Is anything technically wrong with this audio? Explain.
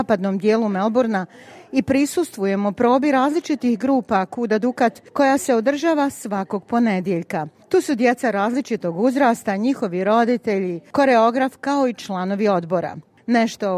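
No, no technical faults here.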